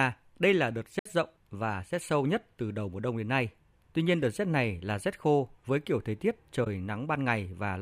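AAC frame loss with muting occurs at 0.99–1.06 s and again at 6.64–6.67 s: the decoder zeroed missing frames, and overlapping windows fade the speech out and back in, leaving soft-edged gaps of about 64 ms and 21 ms, which fit three lost frames and one.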